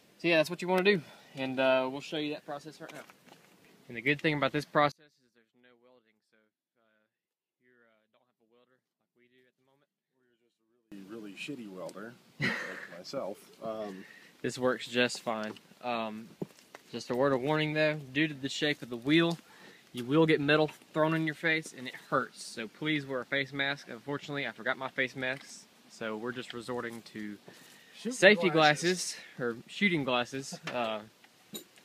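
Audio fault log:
4.92–10.92 s, one channel inverted: in mono the sound drops by about 35 dB and turns faint, likely because one stereo side has reversed polarity, so everything common to both channels cancels and only their slight difference remains audible.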